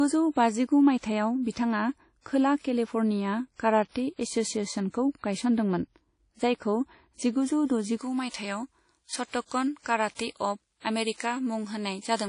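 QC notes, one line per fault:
Throughout: WMA compression. The speech is hard band-limited, with nothing above 10.1 kHz, and the codec damage is plainly audible as a washy, ringing texture whose hiss rises and falls with the voice. This likely comes from a WMA 1 encode at 32 kbps. The transform spreads quantisation noise across long blocks, smearing detail in time. On a spectrogram there is a flat ceiling at 10.1 kHz, with blurred, grainy energy around each syllable instead of clean harmonics.
7.97 to 12.29 s: pre-emphasis left on, starting just after "जायखौ जिगुजौ" and running to the end of the clip. The treble is boosted by about 11 dB at 10 kHz relative to 1 kHz, which fits a J.17 curve whose matching de-emphasis was never applied. The voice turns thin, bright and sibilant from that point. A spectrogram shows the upper bands abruptly brighter from 7.97 s onward, and the waveform looks spikier and more dominated by fricatives.
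8.30 to 8.34 s, 9.46 to 9.51 s and 10.15 to 10.19 s: pre-echo. Before each of these three sharp attacks, codec noise leaks into the quiet moment ahead of the onset, lasting 41, 55 and 43 ms respectively. The encoder sized its noise for the loud part of a block and spread it evenly over the whole block, so each attack is preceded by a brief hiss and sounds softened. On a spectrogram, a faint broadband smear appears just before each onset. On the waveform, a low noise ramp precedes the transient.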